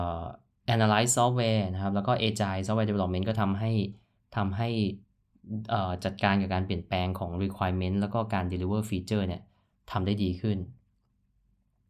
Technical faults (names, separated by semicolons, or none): none